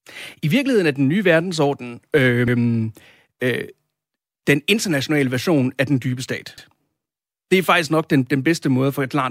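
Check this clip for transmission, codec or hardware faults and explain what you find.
The clip has one fault, from overlapping chunks. The speech was handled in blocks of about 4 s, and at the join between 6.58 and 6.68 s the next block began 100 ms before the previous one had finished. That 100 ms stretch is therefore played twice in a row, so the speech briefly stutters or clicks at that point.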